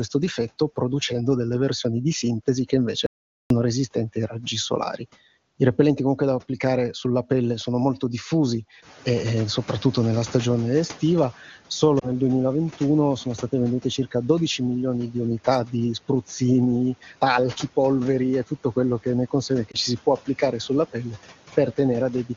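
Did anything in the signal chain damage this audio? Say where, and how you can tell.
Yes. There are three kinds of damage.

Audio dropout to silence, 3.06 to 3.50 s: between "versioni di sintesi che" and "resistenti ai raggi solari" the signal falls to silence for about 0.44 s, with no room tone underneath. That points upstream of the codec, at the input device, driver or link, most likely a momentary disconnect or mute. A packet-loss concealer would fill the gap with synthesized sound or fading noise, not flat silence.

Noise suppressor catching up, 8.82 to 11.37 s: just after "pelle sono molto diffusi" the room noise rises by about 15 dB around 9 s. The call-processing suppressor's noise estimate lags, so the noise first comes through with little reduction, then sinks by about 9 dB over roughly 2.5 s. A real change in the room would not decay steadily on its own while the source stays constant. 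This smooth fade is the estimate adapting.

Lost AMR speech frames, 11.99 to 12.11 s and 19.71 to 19.76 s: each is a brief dip or warble from a single 20 ms frame. The second falls between "che ne consegue che" and "ci si può applicare". Radio errors made the frame fail its checksum, so the AMR-WB decoder, running at 23.85 kbit/s, reused the previous parameters at reduced gain. Unlike the dropout, the gap is never hard silence. It is filled with a short, smeared continuation of the previous sound.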